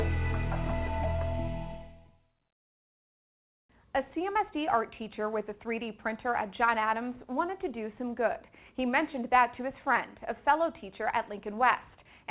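Nothing faulty is audible anywhere in this audio.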